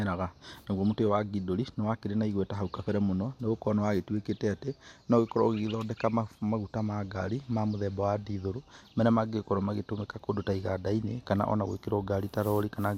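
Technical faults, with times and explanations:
Nothing in this speech recording stood out as a technical problem on listening.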